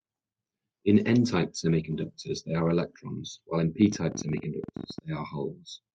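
From 0.97 s to 3.13 s the speech goes through a call bitrate drop: the encoder falls from 64 to 22 kbps for about 2.1 s, so the sound turns coarse and muffled as the highs are cut. It recovers before "while in". Unlike a plain low-pass filter, it also sounds rough and watery.

After "while in", from 3.82 s to 4.99 s, a train of clicks sits over the speech. It is around twenty sharp, similar pulses at roughly 19 per second, unevenly spaced and peaking a few dB above the speech. Interference is the likely cause. Unlike codec damage, the clicks are added on top and do not degrade the speech itself.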